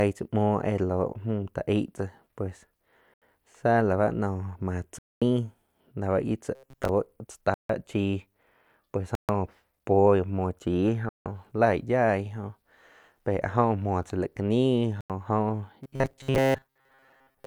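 Speech that drops into short silences six times, at 3.14 s (79 ms), 4.99 s (231 ms), 7.54 s (153 ms), 9.15 s (137 ms), 11.09 s (166 ms) and 15.01 s (90 ms), each time resuming after the gap. These are likely Bluetooth stalls, where delayed packets let the headphones' buffer run empty until resent audio arrived. From 6.55 to 6.90 s, and again from 15.84 s to the end, the voice turns into a rigid metallic buzz near 134 Hz that loosely tracks the speech. This is likely robotic sound from repeated short buffers. Audio arrived too seldom, so playback looped a slice of about 7.5 ms to fill most of the time, skipping the real signal and imposing that fixed pitch.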